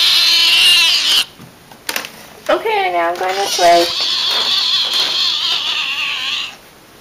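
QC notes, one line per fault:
Throughout, hard clipping: the signal is driven about 11 dB past what the stage can pass, so a few percent of samples hit the ceiling and are cut flat. Those squared-off peaks add high harmonics, heard as harsh fuzz on every loud moment.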